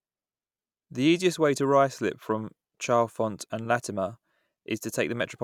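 No technical faults can be heard anywhere in the speech.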